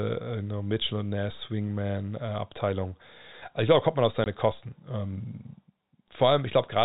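At 4.24 to 4.26 s, packet loss filled with silence cuts a 20 ms hole in the speech, fitting one lost packet. Its edges are hard.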